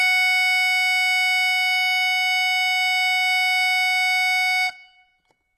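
Throughout the music, the treble above the crossover sounds synthetic and gritty and stops near 12.3 kHz, likely HE-AAC compression at a low bitrate around 16 kbps, rebuilding highs from copied lower bands.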